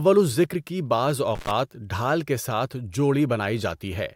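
At 1.35 s, after "الذکر کی بعض", there is an intermittent contact fault lasting until 1.51 s. A loose plug or cable breaks the connection for about 82 ms. The speech drops out, with crackle at each edge, before returning at "ڈھال کے ساتھ".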